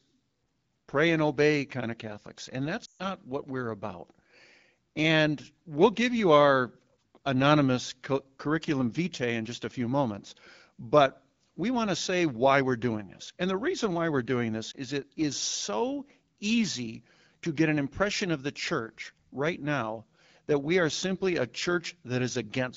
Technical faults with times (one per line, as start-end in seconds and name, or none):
2.85-3.02 lost AMR speech frames
14.71-14.75 lost AMR speech frames